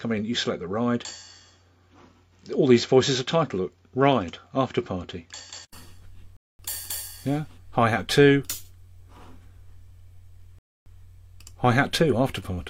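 From the start to 5.73 s the input was likely switched to a poorer device. That narrower path passes nothing above 7.6 kHz, so the sound is duller and carries its own background noise about 50 dB down, with no clear level jump. An 80 ms silence marks the switch back. Two rebuffering stalls follow, where the player ran out of downloaded audio and waited: at 6.37 s the sound cuts to silence for about 0.23 s, and at 10.59 s for about 0.28 s. Each time it resumes exactly where it stopped, adding time without losing any audio.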